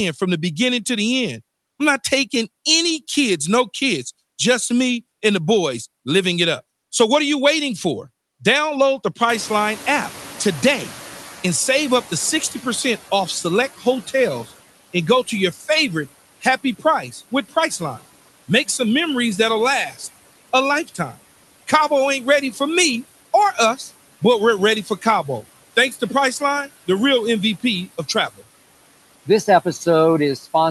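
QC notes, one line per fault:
throughout: Noise suppressor artifacts. Bands the suppressor judges to be steady noise are cut by about 16 dB, frame by frame. So the background sinks in the gaps between words and rises again under them, pumping with the speech.
9.29–13.0 s: Noise suppressor catching up. Room noise jumps by about 23 dB near 9.5 s. The suppressor's noise estimate lags behind, so the noise first gets only about 10 dB of reduction. It sinks over 3.7 s, settling by "off select".
13.78–18.8 s, 19.9–22.6 s, and 23.54 s to the end: Speech cut by the noise suppressor. After the rise, the suppressor takes parts of the speech for noise and turns them down. Drops reach about 15, 12 and 17 dB. Roughly 0.7 s is hit in the first span and 0.3 s in the second, between "memories that'll" and "me or". The third begins after "me or". Affected sounds come out swallowed and faint.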